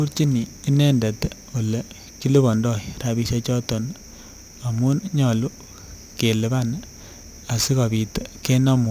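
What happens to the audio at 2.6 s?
Aliasing is audible at 2.6 s, as it is across the whole clip. The speech was resampled to a lower rate without a proper low-pass filter first. Energy above the new limit folds back around 16 kHz, which fits a drop from 48 kHz to 32 kHz. Those folded components land at wrong, unrelated frequencies, roughly 25 dB below the speech. Sibilants sound gritty and metallic, and the spectrum runs hard up to the band edge.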